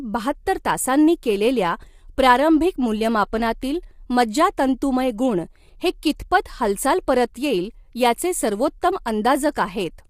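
Low-delay AAC compression runs through the whole speech clip, likely from AAC-ELD at a low rate, with damage that fits something near 32 kbps. The codec works in very short frames, around 10 ms, so it cannot separate the voice's pitch harmonics cleanly and spends its scarce bits unevenly. The result is plainly audible: a rough, grainy voice, noise filling the gaps between harmonics, and a top band that sounds thinned or synthetic.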